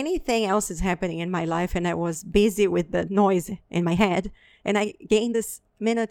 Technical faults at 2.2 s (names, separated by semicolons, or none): compressed frames skipped